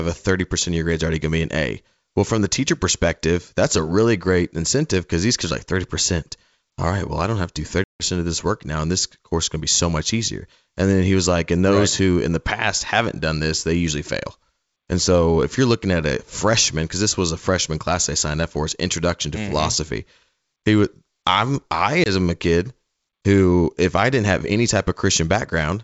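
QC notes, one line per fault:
7.84–8.03 s, packet loss on an ADPCM call: there's a hard-edged hole of about 160 ms of silence, roughly seven packets' worth. The decoder's adaptive predictor and step size lose track of the sender's during the gap, so when the speech picks back up on "of this work now" it comes back slightly distorted. It settles within a few tens of milliseconds.
22.04–22.09 s, packet loss on an ADPCM call: this is a shorter one, about 20 ms lost, likely a single packet, sitting between "would I'm I" and "a kid who if". It's the same mechanism on a smaller scale. The abrupt gap is followed by slightly distorted speech as the predictor and step size resync, and the wideband G.722 path around it stays clear up to 7 kHz.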